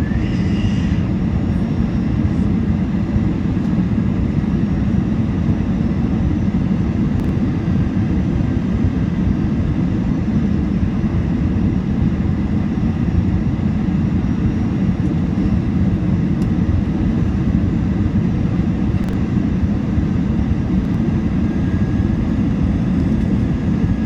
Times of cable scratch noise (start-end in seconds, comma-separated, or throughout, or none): none